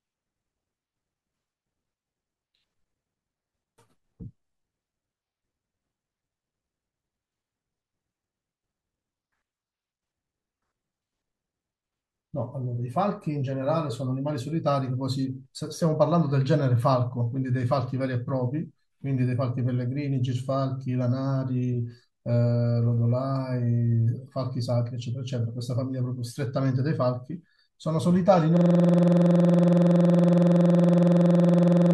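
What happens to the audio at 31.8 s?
At 31.8 s the system has frozen while the sound hardware keeps replaying one ring buffer, a system hang loop running from 28.57 s to the end. A 46.4 ms slice, which fits a 2048-sample buffer, repeats dozens of times at 21.5 Hz, giving a rapid machine-gun stutter.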